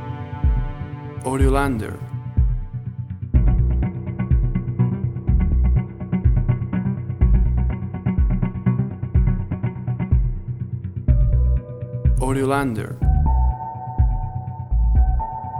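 No technical fault can be heard anywhere in this audio. Nothing in the sound points to a problem in how it was captured, processed or played back.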